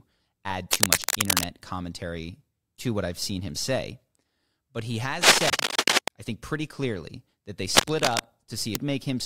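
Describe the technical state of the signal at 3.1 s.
At 3.1 s the speech signal is intact, with no technical fault present at that moment.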